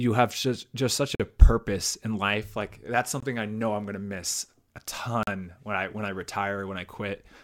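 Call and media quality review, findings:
Gap between stream segments, three spots in the speech: 1.15–1.20 s (about 46 ms), 3.20–3.23 s (about 23 ms), 5.23–5.27 s (about 42 ms). Hard-edged silent holes, roughly every 2 s, matching the segment length. Probable component: packager or player timeline. Segment timestamps don't butt up, so the player pads the hole with silence. Nothing's actually missing, just time inserted.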